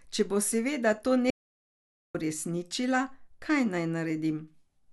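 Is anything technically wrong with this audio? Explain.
Yes. An audio dropout to silence runs from 1.30 to 2.15 s, after "bo seveda to" and before "uresničila kaj". Speech cuts off into complete silence, without room tone, for 0.84 s, then resumes mid-flow. The input was likely lost while the recorder kept writing zeros.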